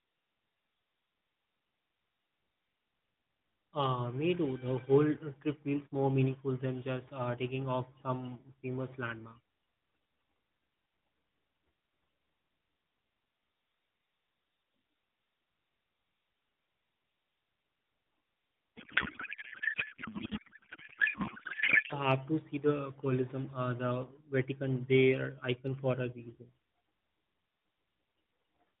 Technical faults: codec payload misread

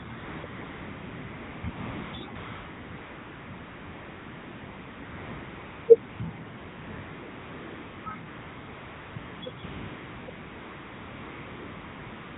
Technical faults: AMR comfort noise

